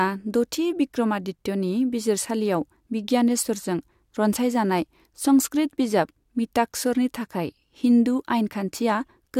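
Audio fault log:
No technical faults are present anywhere in this speech recording.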